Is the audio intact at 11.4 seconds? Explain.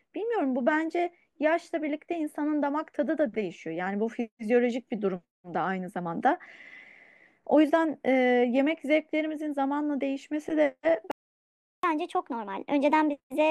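No. At 11.4 seconds the speech falls inside a playback stall running from 11.11 to 11.83 s. The sound cuts off mid-flow into silence for about 0.72 s, then carries on. The likely cause is the player running out of data or its thread being blocked.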